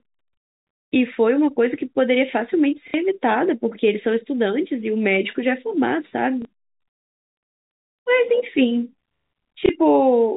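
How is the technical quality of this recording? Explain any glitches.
The speech has three short glitches from packet loss with the last packet repeated. The band stops at 4 kHz, as expected for G.711 telephone coding.

The dropouts fall at 2.88 to 2.94 s (60 ms), 6.42 to 6.45 s (30 ms) and 9.66 to 9.69 s (30 ms), which fits 30 ms packets. When packets failed to arrive, the receiver kept replaying the last good one. The copies seldom line up with the pitch cycle. The 60 ms gap buzzes briefly at about 33 Hz, a robotic stutter. In the waveform, identical blocks repeat side by side with steps at the joins. On a spectrogram, a frozen stretch of the spectrum is crossed by thin vertical lines at each seam.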